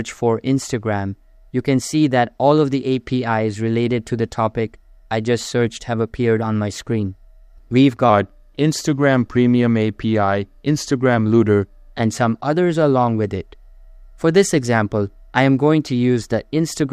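From 8.10 s to 11.93 s there's a wrong sample rate problem. Everything in that stretch drags and sags: it runs at about 0.92 times normal speed and drops roughly 1.5 semitones, with pitch and tempo sliding down together because nothing resampled the audio. That ratio fits 48 kHz material being pushed out at 44.1 kHz, so the samples simply come out too slowly, and the section sounds slightly lower and slower before snapping back.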